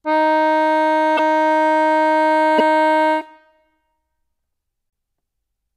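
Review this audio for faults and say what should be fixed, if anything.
The music glitches three times: from 1.16 to 1.19 s, from 2.58 to 2.60 s, and once more at 4.90 s. Each time it briefly jumps ahead. The first two last about 30 ms, roughly one 26.1 ms MP3 frame. That points to a likely broken MP3 bit reservoir: frames got dropped, so the next frame reached back for borrowed data and decoded the wrong bytes. To avoid this, cut or splice MP3 streams only with frame-aware tools, or re-encode from the original.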